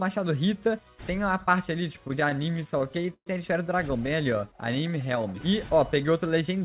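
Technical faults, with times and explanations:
1.93–3.27 s, repeated stalls (stutter): the sound catches and drags in a string of brief holds, the longest about 125 ms, filling roughly a fifth of the span. Packets arrived late, the jitter buffer kept running dry, and the receiver stretched the last sound each time, losing nothing.
4.22–5.19 s, jitter buffer slow-down: the audio runs at about 91% speed with pitch unchanged, drawn out by roughly 93 ms. A jitter buffer that was running low or had just raised its target delay rebuilt its reserve by repeating single pitch periods and bits of pauses in quick succession.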